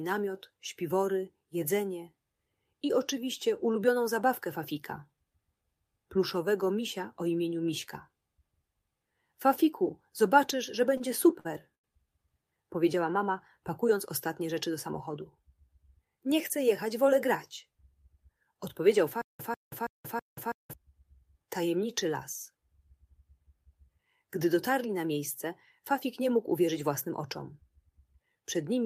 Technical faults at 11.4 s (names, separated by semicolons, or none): short stall from a late packet